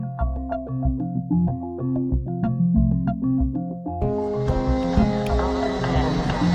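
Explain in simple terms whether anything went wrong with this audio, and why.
Nothing went wrong here that a listener would notice: the audio plays through cleanly the whole way, with no dropouts, glitches or odd noises to point to.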